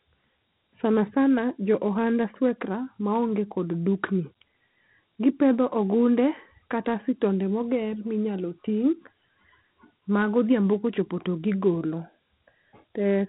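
From start to finish the speech carries Dialogic VOX ADPCM damage. Everything above about 3.9 kHz is gone, and a gritty hiss rides along with the voice, the sound of coarse 4-bit steps tracking the waveform, which fits a 32 kbps stream.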